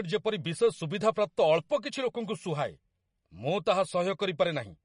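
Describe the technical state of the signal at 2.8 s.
At 2.8 s the speech carries MP3 compression damage that runs through the whole clip. Nothing is present above 10.5 kHz, and weak spectral detail switches on and off between frames, giving a watery, swirly texture with smeared attacks, likely from a bitrate around 40 kbps.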